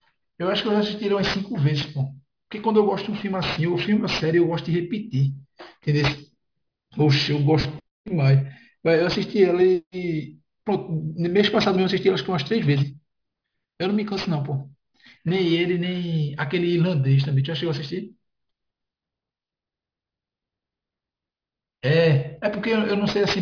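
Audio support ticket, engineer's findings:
Aliasing, whole clip. Sibilants gritty and metallic, with inharmonic tones that don't track the speech. Spectrum runs hard up to about 5.5 kHz, the fold point. Points to a downsample from 44.1 kHz to about 11 kHz with no anti-alias filter. Content above 5.5 kHz mirrored back into band at roughly -15 dB relative to the signal. Probable component: resampler stage.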